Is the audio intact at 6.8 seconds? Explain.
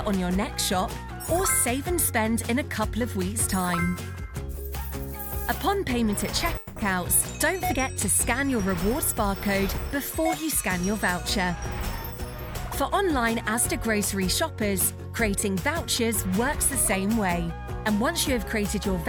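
No. Packets were likely delayed and the jitter buffer ran dry, causing a call audio freeze from 6.57 to 6.78 s: a fading buzz fills the gap, then the audio resumes about 190 ms late.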